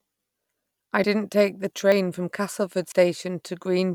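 Speech, with three abrupt jumps at 1.04 s, 1.92 s and 2.92 s, each a sudden jump where around 40 ms of sound goes missing. The sides butt together with no silence, unlike a dropout gap, so this is likely a dropped buffer (overrun).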